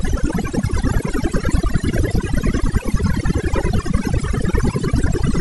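Overdone noise removal runs throughout: an over-aggressive noise reducer cuts bands near its noise estimate, leaving a lowered, twinkling background and cutting quiet parts of the speech along with it.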